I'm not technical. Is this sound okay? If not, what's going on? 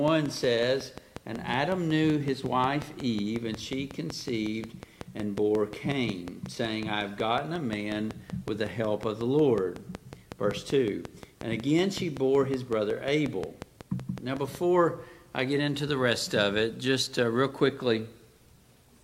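No. There is a train of clicks from 0.08 to 14.56 s. A steady tick sounds about five and a half times per second, roughly seventy clicks, louder than the sound itself. The likely cause is interference from nearby equipment or a faulty connection or power supply.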